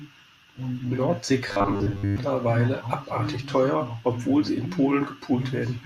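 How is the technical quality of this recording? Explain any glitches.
There's one clear glitch in the speech. From about 1.48 to 2.18 s you get robotic sound from repeated short buffers: the voice turns into a stiff, metallic buzz locked at 100 Hz, loosely tracking the words. That's likely the player repeating roughly 10 ms chunks when fresh audio arrived too late, so most of that stretch is replays rather than real signal.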